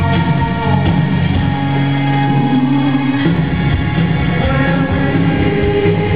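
Faint clock slip clicks tick through the sound about every one and a half seconds from 0.81 to 5.92 s, likely two unsynced clocks drifting around 20 ppm apart.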